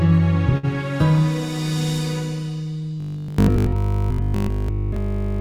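At 0.57 s a packet arrived late and the jitter buffer ran empty, so the receiver held the last sound for 58 ms until it came, then resumed from the same point. This short stall from a late packet loses nothing, but the sound freezes briefly with a faint buzz, and everything afterward runs 58 ms later.

From 3.00 s to 5.40 s new audio is likely arriving too seldom, so a short slice is replayed in place of fresh material, which fits a 20 ms buffer. This robotic sound from repeated short buffers lays a fixed 50 Hz buzz over the whole stretch, leaving the sound rigid and metallic.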